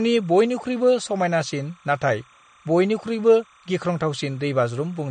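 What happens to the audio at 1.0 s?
At 1.0 s, timecode bleed runs beneath the speech, as it does across the whole clip. It is a faint chirping warble switching near 1 and 2 kHz, well below the speech. Its steady 30 frames-per-second rhythm separates it from a hum or a single whine.

Also present throughout, likely from MP3 compression at a low bitrate around 40 kbps, is a plainly audible watery swirl. Nothing is left above 9 kHz. Unlike a simple low-pass filter, weak details flicker in and out from frame to frame.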